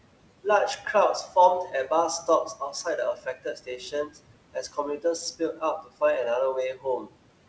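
Noise suppressor artifacts run through the whole clip. The suppressor lowers the steady room noise by about 18 dB, frame by frame. The noise sinks in the gaps and returns under the speech.

Speech cut by the noise suppressor appears four times. At 0.77 to 0.86 s, about a tenth of a second is dipped by up to about 9 dB. From 2.23 to 4.17 s, roughly 0.7 s in total is pulled down by up to about 16 dB. From 4.54 to 6.02 s, about 0.4 s drops by up to about 17 dB. From 6.74 to 7.14 s, about 0.15 s falls by up to about 16 dB. In each case the suppressor mistook soft speech for noise. Those parts sound swallowed and faint. The room noise, about 18 dB below the speech, is what the suppressor is fighting, and the call codec leaves nothing above 8 kHz.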